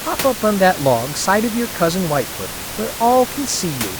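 Nothing stood out on listening to this speech, with only the room's own background noise sitting about 10 dB beneath it.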